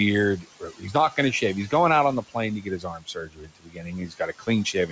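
Right from the start there's noise suppressor artifacts running the whole way through. The suppressor is pulling the room's steady background down by about 15 dB, frame by frame, so the noise dips in the gaps and creeps back up under the talking. That background sits about 15 dB under the speech to begin with, and the top end stops at 8 kHz, which fits a G.722 call path.

Then between 0.37 and 1.18 s you get speech cut by the noise suppressor. It mistook parts of the speech for noise and ducked them, up to about 17 dB, over something like 0.4 s of that stretch, so bits of it sound swallowed right before "going to shave". It happens again from 2.61 s to the end, dropping as much as about 18 dB, with the same faint, eaten-away quality on softer sounds and endings.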